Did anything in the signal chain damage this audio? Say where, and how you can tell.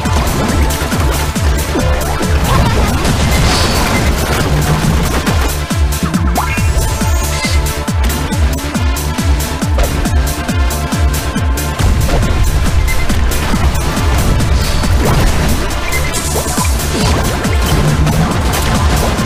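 Yes: periodic USB or driver dropouts, from 10.37 s to 18.86 s, at the driver or buffer stage. A tick returns every 0.5 s, around twenty in all. At each one, roughly a millisecond of audio is replaced by silence. That even spacing points to a background task stalling the USB bus or audio driver on a fixed schedule, briefly starving the stream. The gaps are audible as ticks only because sound is running through them.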